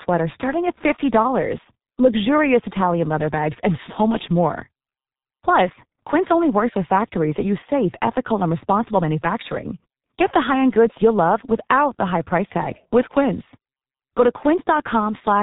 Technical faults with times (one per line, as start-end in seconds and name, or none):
0.00-15.42 G.723.1 codec